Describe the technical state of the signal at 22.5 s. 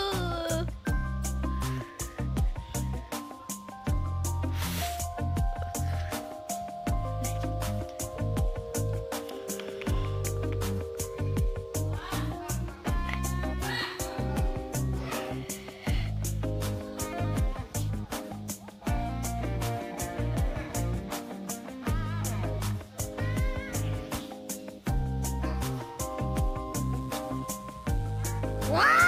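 At 22.5 s the signal is intact, with no audible dropout, distortion or other technical fault at that point.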